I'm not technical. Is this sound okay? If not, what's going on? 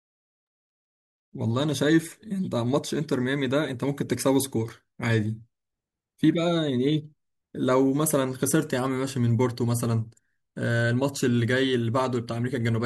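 Yes, it's fine: nothing in this recording skips, cuts out, crackles or wobbles, so there's nothing to worry about.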